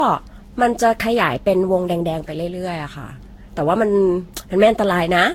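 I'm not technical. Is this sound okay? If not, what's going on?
No. Generation loss runs through the whole clip: the speech sounds swirly, smeared and hollow, with blurred starts to sounds. The likely cause is the recording being compressed and re-saved about seven times, each pass adding fresh damage that piles up.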